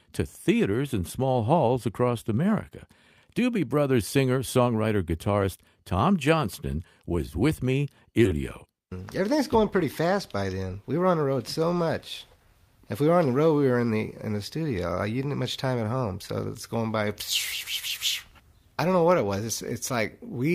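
At 8.25 to 8.27 s the audio lurches forward: roughly four tenths of a second never plays, and the material on either side is butted together with no silence or fill between them. This is a skip ahead. Audio that was already queued behind the missing stretch simply took its place, so playback jumped, and the delay shortened by about the same amount. From 8.35 to 10.50 s the sound then runs noticeably hurried, about 9% fast, yet its pitch stays where it was. That is a jitter buffer speed-up. With more audio stacked up than its target, the receiver trimmed out many tiny slices, each one or a few pitch periods long, in close succession. That took out about a fifth of a second in total and compressed the timing without shifting pitch, until the buffer came back down to its intended depth.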